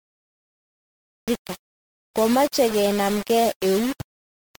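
Speech that opens on digital silence until 1.28 s, where the audio starts abruptly in the middle of a sound with no attack or fade. That is a cut-off start: the recording began late. Unlike a dropout or gate, nothing precedes the silence, and the voice never builds from zero.

The speech carries a coarse grain that follows the signal. Distortion rises and falls with the voice, the error sits only around 15 dB below it, and the quietest stretches sputter between a couple of levels or fall to nothing. That points to low bit depth without dither, consistent with roughly 4-bit rounding. Broadband hiss would stay constant underneath instead.

Layered over that is a swirly, hollow smear with blurred consonant onsets, worse than a single MP3 pass at this quality would produce. This is likely generation loss from re-encoding through an MP3 chain around 96 kbit/s, perhaps half a dozen times or more. 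The fresh quantisation on each pass accumulates holes and smearing that one low-bitrate encode would not. The grit from the bit depth changes with level, whereas the codec damage shows as phasey smearing in time and frequency.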